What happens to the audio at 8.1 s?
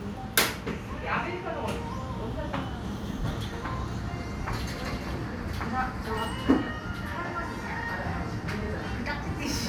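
Nothing goes wrong at 8.1 s: the everyday sound carries on intact through that moment, with no dropout, click, glitch or other fault.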